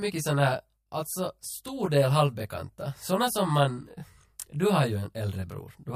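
Throughout the speech, channel delay (comb filtering): one channel lags roughly 20 ms, so the mono sum cancels at evenly spaced notches from around 20 Hz, sounding rough and slightly doubled.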